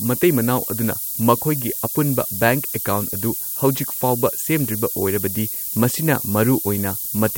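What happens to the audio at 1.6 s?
At 1.6 s the speech carries low bit depth with noise shaping, as it does throughout the clip. The coarse quantisation, which fits a 5-bit signal, has its rounding error pushed upward, giving a loud, thin hiss nearly level with the speech. A spectrogram shows noise climbing steeply toward the top band, and the waveform looks stepped and fuzzy.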